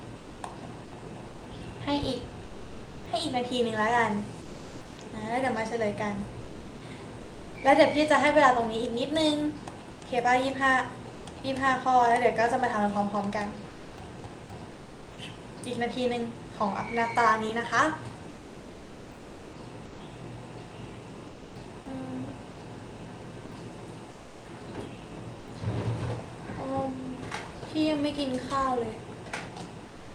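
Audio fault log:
0.85–7.51 s, 13.69–15.07 s, 18.31–21.55 s: sound chopped by the voice detector. The sender's detector repeatedly toggled between sending and pausing, so quieter passages and onsets and tails were swapped for synthetic fill: about 1.86 s of the first stretch, 0.6 s of the second and 1.56 s of the third. The result is choppy, likely from Opus DTX gating.
11.17–11.23 s, 24.13–24.43 s: sound dropped by the voice detector. At each point the detector judged low-level sound to be background and stopped sending, and the receiver substituted comfort noise until transmission resumed. The first gap lasts 60 ms and loses 30 ms of sound. The second lasts 300 ms and loses 120 ms. Each is heard as a brief dropout, likely caused by Opus DTX discontinuous transmission.
29.89–30.14 s: comfort noise in place of the background. With no active sound detected, transmission paused and the receiver generated about 257 ms of shaped noise in place of the true ambience. 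This background, sitting about 18 dB below the loud parts, loses its texture and becomes a flat, featureless hiss about 2 dB quieter than before. The hiss runs to the end of the clip, likely produced by Opus DTX comfort-noise generation.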